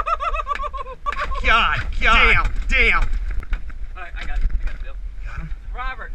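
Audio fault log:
1.06 to 3.40 s, doubled audio track: a second, full-band copy of the sound runs about half a second behind the first and at roughly the same level, so every event is heard twice in quick succession. The copy has no decay or room colouring, which sets it apart from a real echo, and it cuts in and out abruptly at both ends. This likely comes from the audio being captured a second time through a slower path, or an edit leaving two offset copies in place.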